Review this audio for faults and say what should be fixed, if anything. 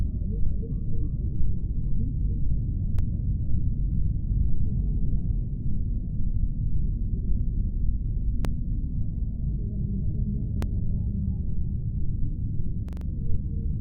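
Repeated buffer at 2.99, 8.45 and 10.62 s (once each) and 12.89 to 13.06 s (four extra plays). A 43 ms block, fitting a 2048-sample buffer, replays with hard joins. Keep the output buffer fed by enlarging it or prioritising the audio thread.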